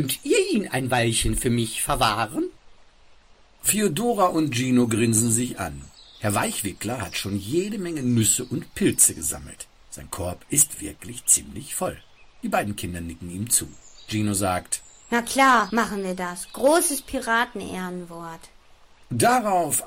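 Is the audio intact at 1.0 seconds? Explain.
Yes, the audio is intact at 1.0 seconds, with no dropout, click, distortion or other fault at that moment.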